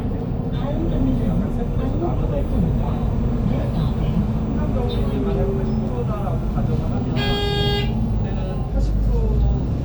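From 0.54 s to 7.08 s, timecode bleed sits behind the sound: linear timecode from an adjacent track or cable has leaked into the audio path. It is a faint, steady chirping warble, roughly 35 dB below the main sound. On a spectrogram it appears as two thin horizontal lines near 1 and 2 kHz. The energy flickers between them in a regular pattern repeating 30 times per second, matching the frame rate. The waveform barely shows it.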